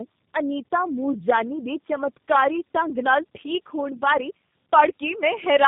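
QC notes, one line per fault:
throughout, tandem speech coding: the speech passes through two low-rate speech codecs in a row, and the roughness, muffling and warble fit an AMR-NB stage near 7.4 kbit/s re-coded by G.729A at 8 kbit/s, with plain G.711 A-law carriage between them. The second coder models speech that the first has already smeared, so their errors compound. Nothing is present above 3.6 kHz, which gives the dull, band-limited quality.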